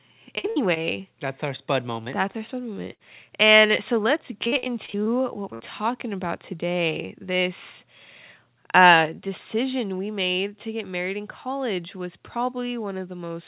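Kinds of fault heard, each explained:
Burst of packet loss: Runs of packets went missing, and each gap was filled by extending the last sound and fading it. About 60 to 80 ms of speech drops out each time.
Short concealed packet loss: About 20 ms went missing three times and was patched from the preceding sound. The result is a brief smear or wobble in the speech.
Repeated packet loss (robotic sound): Seven closely spaced gaps, none longer than about 41 ms, make the speech choppy. About a third of that stretch is filled in.
Microphone overload: Speech peaks run about 3 dB past the converter's limit, and their tops are flattened. This is likely from an input volume set too high, and it adds a harsh crackle.
Microphone volume stepped down: Right after that distorted peak, speech and background drop suddenly by about 5 dB. This is likely the call software lowering the microphone gain in one step.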